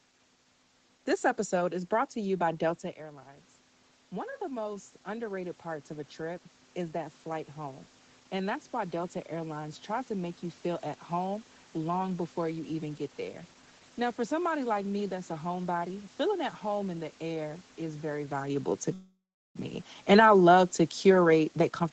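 At 18.93 s, right after "is very valuable to", the sound stalls for about 0.64 s: a fading buzz trails off into roughly 0.35 s of near silence, then resumes where it stopped with nothing lost. This is a call audio freeze, likely from delayed packets draining the jitter buffer.

From 21.03 s to the end, after "I love to", the speech runs hurried at unchanged pitch, about 125% speed. This is a jitter buffer speed-up: the buffer trimmed repeated pitch-period slices, around a fifth of a second in total, to cut excess delay.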